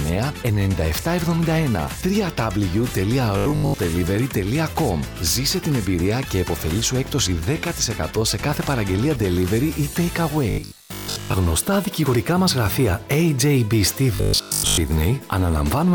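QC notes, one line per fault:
3.38 to 3.78 s, 10.50 to 11.34 s, 14.15 to 14.77 s: robotic sound from repeated short buffers. A rigid, metallic 50 Hz buzz replaces most of the sound, likely because a 20 ms chunk is looped while new audio arrives too late.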